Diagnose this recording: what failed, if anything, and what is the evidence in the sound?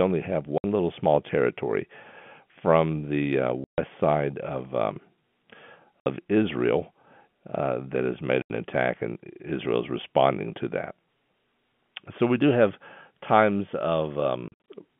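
Packet loss filled with silence at 0.58, 3.64, 6.01, 8.42 and 14.48 to 14.67 s: a network fault where dropped packets leave hard-edged gaps of up to 140 ms, consistent with 20 ms packets.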